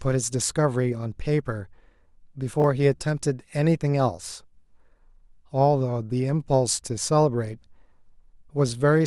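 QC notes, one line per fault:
2.60–2.64 s, chunks out of order: a 20 ms chunk plays one chunk late, producing a brief jumbled stutter; waveform shows three abrupt steps, spectrogram thin broadband vertical lines.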